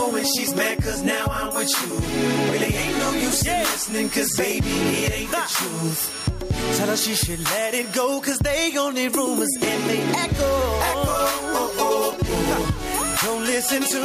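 The sound shows gain pumping from start to finish. The level ducks under each loud sound and climbs back in the gaps, swinging by around 10 dB. The likely cause is input gain set far too high, with a fast limiter or compressor pulling it down.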